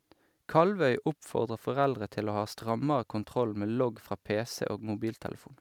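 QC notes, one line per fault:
No faults to note.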